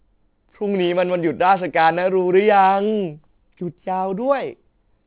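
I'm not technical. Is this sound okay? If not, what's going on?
No, not quite. The whole speech clip has aliasing: it was squeezed down to a low sample rate, likely around 8 kHz, without filtering first, so sounds above 4 kHz fold back as faint wrong pitches, making s and sh sounds gritty and metallic.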